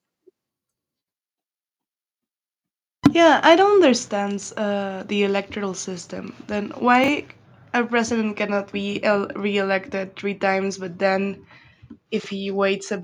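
At 3.05 to 3.07 s the loudest syllable breaks into a harsh, crackling edge. This is microphone overload. The input level was likely set too high, so the peaks ran about 6 dB past the converter's ceiling. Their tops are sheared flat. Roughly one sample in seven in that stretch is clipped. The result is a brittle, buzzy burst rather than a clean peak.

At 3.07 s, right after that distorted peak, the speech and the room noise behind it both drop by about 2 dB in one step. This is the microphone volume stepped down. The call software likely reacted to the clipping by lowering the device's input gain. A second, larger step follows at 4.08 s, between "I don't" and "uh the electoral system". There the level falls by about 4 dB. Both changes are abrupt, with no fade. The background steps down with the speech, which points to a change in input gain rather than the talker getting quieter.

At 7.04 to 7.08 s the audio briefly jumbles. 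These are chunks out of order. A 20 ms chunk arrived one chunk late and played after the one that should follow it. Nothing is missing, but the swapped order leaves hard seams. The same fault returns at 12.2 to 12.26 s. This time a 20 ms chunk is two chunks late, so the garbled stretch is a little longer.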